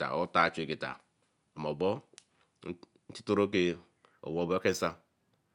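From 4.12 s to the end at 5.55 s, the top of the speech turns dull while a faint metallic shimmer clings to the sibilants. This is imaging from linear upsampling: the rate was raised by joining samples with straight lines, which fits audio at 22 kHz brought up to 48 kHz. That crude interpolation rolls off the highs and leaves a mirrored copy of the spectrum between 11 kHz and 22 kHz, roughly 30 dB down.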